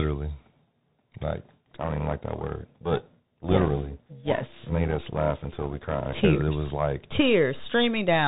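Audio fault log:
throughout: Bluetooth CVSD headset codec. Nothing passes above 3.8 kHz, and the one-bit delta coding, consistent with a 64 kbps stream, leaves a granular hiss under the speech and scratchy s sounds where loud high content outruns the adaptive step. Unlike smoother narrowband codecs, the damage is a plainly audible grit rather than muffling alone.
1.71–6.25 s: overlap-add ripple. The level pulses by about 11 dB at a steady rate of roughly 300 Hz, giving a metallic buzz with extra tones around each note that ends just before "it was like". The windowed frames were rejoined with an overlap that doesn't sum to constant gain. Its fixed, fast frame-rate regularity separates it from dropouts or slow tremolo.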